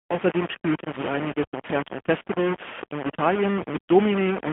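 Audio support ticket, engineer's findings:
Grainy, gritty distortion through the whole clip, riding on the speech and shifting with it. Error sits only about 10 dB under the signal, so it's heavy. Likely low bit depth without dither, rounding that fits roughly 4 bits.

Band-limited, buzzy, synthetic speech throughout, carried on a 150 Hz to 3.4 kHz line band with nothing above 3.6 kHz. Plainly audible AMR narrowband mobile codec damage. Vocal-tract model plus pulse coding, pointing to the AMR-NB 10.2 kbps mode.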